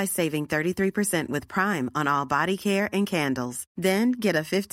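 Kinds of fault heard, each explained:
No kinds of fault are heard in this recording.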